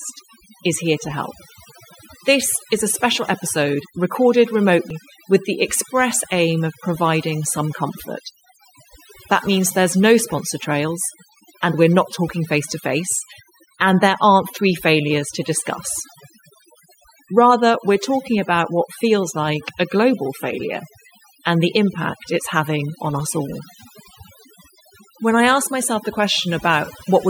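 Overdone noise removal runs through the whole speech clip. The noise reducer was set too hard. It cuts frequency bands that sit near its noise estimate, taking quiet speech detail with them. The background drops and breaks up into twinkling specks.

At 4.90 s, just after "a special episode recorded", there is a CD skip. The laser jumped to another turn of the disc's spiral. Playback mutes for a few milliseconds, giving a tick. Then it resumes elsewhere before "with the express aim".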